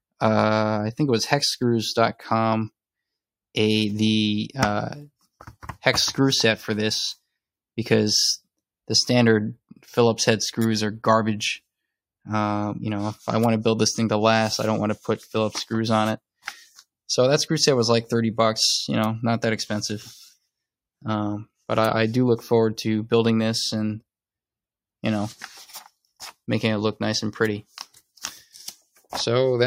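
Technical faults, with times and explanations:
No technical faults detected across the clip; nothing in the signal chain calls for attention.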